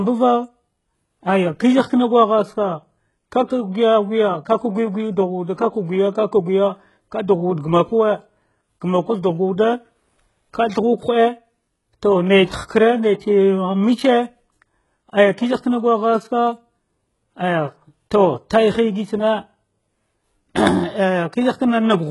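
Speech with HE-AAC compression damage running through the whole clip, most likely from a very low bitrate around 12 kbps. The damage is heavy: sibilants come out gritty and lispy, and the treble sounds synthetic, with nothing above 11.4 kHz. What separates this from a plain low-pass or ordinary AAC smearing is that the upper band is present but its harmonics fail to line up with the lower spectrum, as copied-up spectral band replication would produce.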